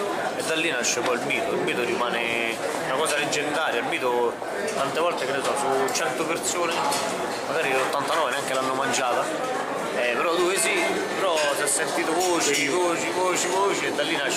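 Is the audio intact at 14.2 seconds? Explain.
Yes, the audio at 14.2 seconds is intact, with no dropout, glitch or other fault at that moment.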